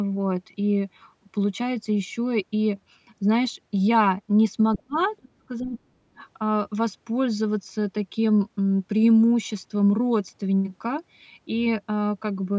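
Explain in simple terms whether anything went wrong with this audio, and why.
Several things went wrong in a short stretch of this speech clip, between about 4.7 and 6.2 seconds.

Other side's voice leaking through: faint scraps of a second voice appear at 4.73 to 4.78 s and 4.96 to 5.04 s, well below the main talker. The likely cause is that the device played the far end on its loudspeaker and the echo canceller failed to fully remove that sound from the microphone.

Speech suppressed in double talk: the talker's voice dips three times, each for about a fifth of a second, at 4.77 to 4.98 s, 5.2 to 5.41 s and 5.59 to 5.78 s. The first dip is nearly a dropout, and the later ones are milder. This likely happened because both sides spoke at once and the canceller turned everything down.

Background gated by the echo canceller: at 6.08 to 6.16 s the room sound briefly dips for about 70 ms, then comes back. 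The canceller pulled the microphone down hard while the loudspeaker was active and released it straight afterwards.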